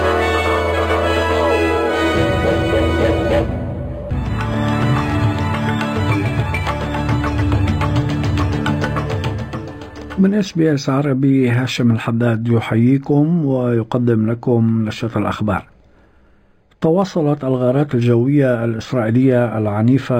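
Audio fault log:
throughout: imaging from linear upsampling. The top end sounds dull, with a faint metallic shimmer on sharp, bright moments. The rate was raised by joining samples with straight lines, which filters poorly. The sound fits an 11 kHz original raised to 48 kHz. Real content stops near 5.5 kHz. Above it, a mirrored copy of the spectrum fills roughly 5.5 to 11 kHz, around 30 dB below the signal. That leftover image is the shimmer.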